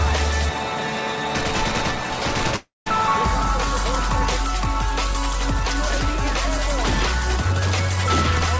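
From 2.56 s to 2.88 s the sound breaks off. The last moment before the gap is stretched into a buzzy, fading continuation, then roughly 0.17 s of near-silence follows before the audio resumes further on, with about 300 ms of material simply gone. This is likely a long network dropout: nothing reached the receiver for that stretch, so it padded the hole with a decaying imitation and then went quiet. Throughout, the call path's bandwidth stops at 8 kHz, which fits a G.722 codec.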